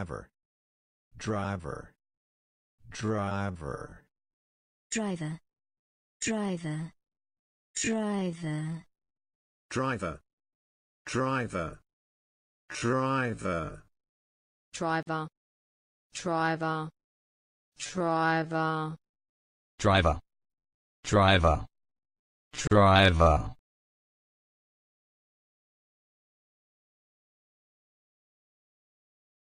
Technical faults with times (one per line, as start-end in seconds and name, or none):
15.03-15.07 gap at a join of encoded pieces
22.67-22.71 gap at a join of encoded pieces